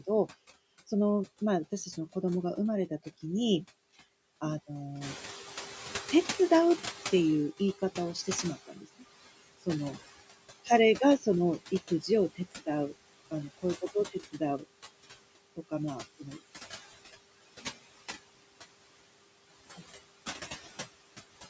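Noise suppressor artifacts run through the whole speech clip. The suppressor pulls steady background down by about 19 dB between phrases and lets it rise again under the voice. A plain gate would cut cleanly instead.

At about 5.0 s the room noise jumps by about 11 dB. From 5.01 to 8.65 s the noise suppressor is catching up. Its estimate lags, so the louder noise passes with less reduction at first, then sinks by about 17 dB over roughly 3.6 s. That gradual fade is distinct from the frame-by-frame flutter.

Speech cut by the noise suppressor follows at 7.79–9.03 s, 11.71–12.93 s, 13.31–14.64 s and 15.56–16.42 s, with drops of about 16 to 19 dB and roughly a third of a second of speech affected each time. Parts of the speech turn faint and swallowed, but the timing stays intact, without the gaps or clicks of lost audio. The band-limiting to 8 kHz from the call microphone processing sits beneath all of this.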